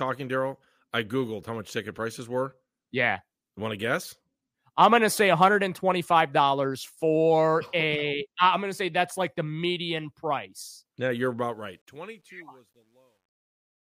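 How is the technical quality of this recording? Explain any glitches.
The recording has one clear fault, at its very end. It is truncation distortion on a fade. The fade-out runs from about 11.4 s to 13.9 s. From 11.42 s its low-level detail turns gritty. The stage shaping the fade drops the finest bits without dither, which points to about 11 bits. Near silence the waveform becomes coarse steps. From 12.28 s to the end, the distortion is at its worst.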